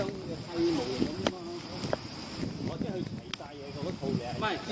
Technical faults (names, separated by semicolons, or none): none